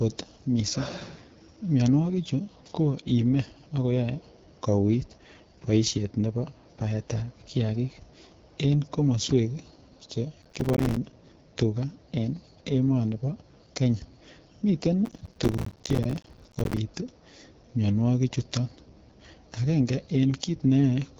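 The whole clip has the rough, raspy edge of the AMR wideband (HD Voice) codec, with nothing above 7.6 kHz, which fits a low mode such as 8.85 kbit/s. Then from 10.42 to 10.97 s, and again from 15.05 to 16.77 s, processor overload crackle tears through the speech: about 40 and then about 150 short buffers, around 5 ms each, miss their deadline and drop to silence.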